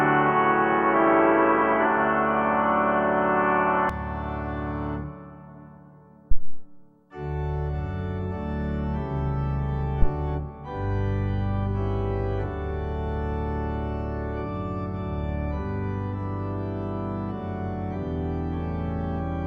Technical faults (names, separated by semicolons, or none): input switched to a poorer device; phantom power thump